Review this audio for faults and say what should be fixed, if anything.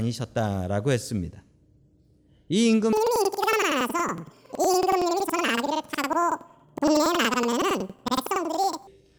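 From 2.93 to 8.93 s the speech jumps an octave with a flutter at 10.8 Hz: planar audio read as interleaved. Each 93 ms block, which fits 4096-sample blocks, plays left then right at double speed. Spectrograms show doubled harmonics with vertical seams every 93 ms. Tag buffers with their channel layout so planar data is never passed to an interleaved reader.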